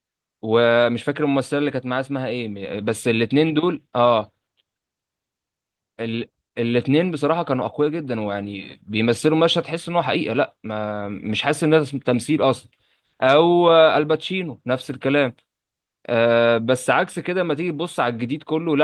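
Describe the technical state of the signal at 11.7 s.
At 11.7 s the speech signal is intact, with no audible dropout, clipping, glitch or other fault at that moment.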